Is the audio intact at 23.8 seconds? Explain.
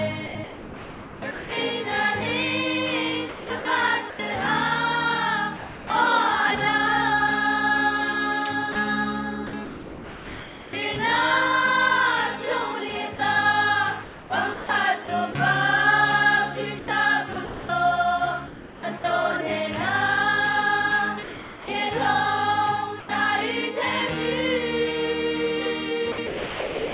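Yes, the audio is intact at 23.8 seconds, passing through the call path as expected, with the narrowband codec leaving nothing above 4 kHz.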